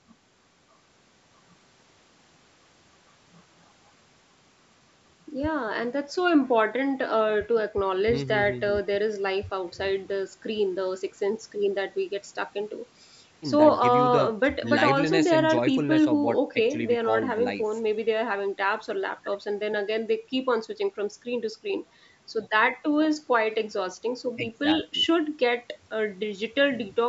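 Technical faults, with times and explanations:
Nothing wrong turns up in this speech recording; it's simply been through a call's microphone processing, so the deepest bass is trimmed and nothing reaches above 8 kHz, which is just how that path normally sounds.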